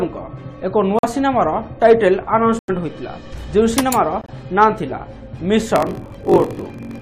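Sudden dropouts to silence at 0.99 to 1.05 s, 2.59 to 2.70 s and 4.21 to 4.30 s are corrupt frames muted: the decoder rejected damaged compressed frames and silence filled their place. From 5.74 s to the end, a steady 46.9 Hz buzz appears and the audio runs slower, at 0.938 times normal speed, with pitch largely unchanged. This is a block size mismatch (padded): each shorter written block is zero-filled to the reader's size, which fits 960-sample blocks read as 1024.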